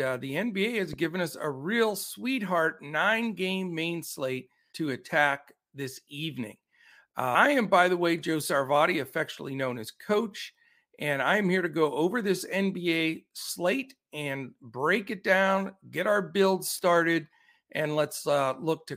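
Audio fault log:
0.93–1.07 s, loud pop: two sharp pops in quick succession, peaking roughly 5 dB above the speech, which carries on underneath just before "us a real sweetheart". This is likely a voltage pulse from a switch, static or driver glitch entering the signal chain.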